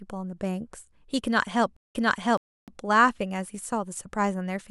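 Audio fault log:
1.77 to 2.78 s, stream reconnect: the connection dropped and the player rejoined the stream with a fresh decoder, so the speech cuts to silence for 162 ms and then resumes about 0.55 s earlier, repeating a stretch already heard because the server resent buffered audio.
2.37 to 2.68 s, playback stall: the player likely ran short of data or had its output thread blocked. The speech stops in mid-flow and the output sits silent for about 0.3 s before carrying on.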